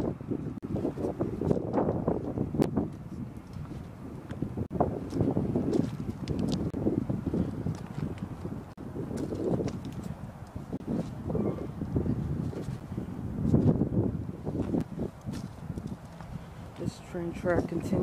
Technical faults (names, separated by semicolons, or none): gap between stream segments